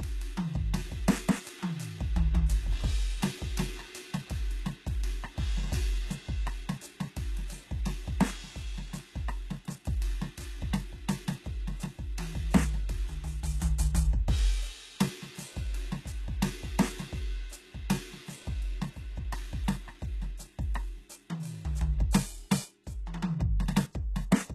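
From start to finish the music sounds dull and smeared, with nothing at all above about 12.3 kHz and a watery, swirling quality in the upper range that a generous bitrate would not leave behind. This is likely low-bitrate audio saved at a high bitrate: the sound points to a very low-rate HE-AAC stage before the MP3 at around 256 kbit/s. The second encoding keeps the first one's losses and missing top end without restoring them.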